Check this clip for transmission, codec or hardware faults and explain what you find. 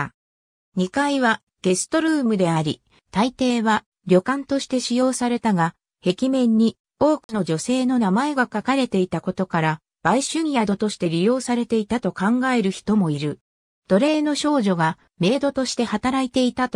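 One fault is present, a brief dropout between 7.24 and 7.34 s. The audio cuts to about 50 ms of silence and then resumes. It is likely a Bluetooth stall, where radio interference delayed packets until the headphones' buffer emptied and playback halted awaiting retransmission.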